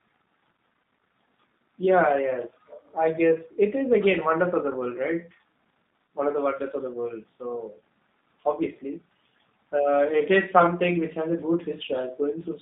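Speech carried through a G.729 codec throughout, band-limited to roughly 150 Hz–3.7 kHz, with plainly audible rough, synthetic texture consistent with 8 kbit/s CELP-style coding.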